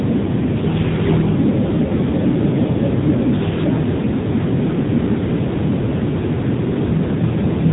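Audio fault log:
Throughout: AMR narrowband mobile codec. The speech passes through a narrowband phone coder, so nothing above 3.8 kHz survives. Each 20 ms frame is rebuilt from a vocal-tract model and a few pulses. The plainly buzzy, synthetic tone points to a rate near 8 kbps.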